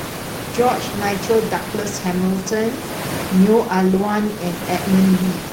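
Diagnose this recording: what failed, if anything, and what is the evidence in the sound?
Nothing stood out on listening to this speech recording, with the room noise sitting about 13 dB below the speech as part of the acoustic environment rather than anything the system introduced.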